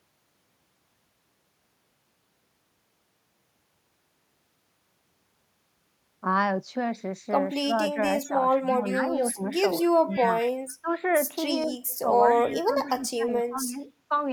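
From 7.62 to 10.24 s the speech dips by up to about 20 dB in pieces totalling about a second, most likely speech suppressed in double talk: the echo canceller mistook this talker for loudspeaker echo while the far side was playing, and turned both down. The same dipping returns at 10.81–10.88 s, at 11.66–11.70 s (only about 5 dB), and across 12.02–13.82 s (up to about 20 dB, about a second in total).

Overlapping these, a delayed copy of one voice trails it by 202 ms at 8.26–8.78, 10.11–10.51, 11.89–12.55 and 12.87–12.91 s, about 20 dB below the speech (about 25 dB in the last). This is likely an echo leak, where the far end's canceller let part of its loudspeaker pickup return.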